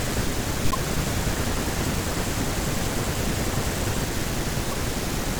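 Speech with two short bursts of corrupt frame decoded: a burst at 0.71–0.75 s, about one frame long, and a quieter burst over roughly three frames at 4.65–4.73 s. The decoder played bit-damaged frames, putting energy at the wrong frequencies. Unlike a dropout or click, each burst adds frame-length tonal or noisy content instead of silence or a single transient.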